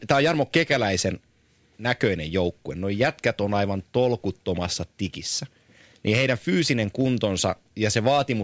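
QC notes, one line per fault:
No problems stood out on listening to this speech recording.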